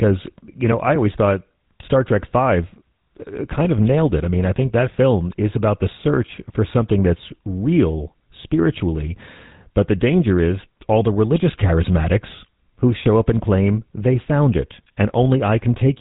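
Speech heard through the GSM full-rate codec for its entire length, with plainly audible damage: a buzzy, gravelly roughness from regular-pulse excitation, which fits the 13 kbps full-rate scheme, and nothing above 3.8 kHz. A simple telephone-band filter would dull the top end without adding this grainy buzz.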